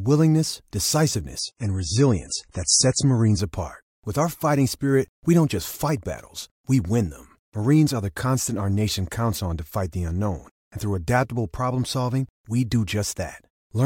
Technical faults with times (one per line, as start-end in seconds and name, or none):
1.39-3.39 adaptive stream at a lower bitrate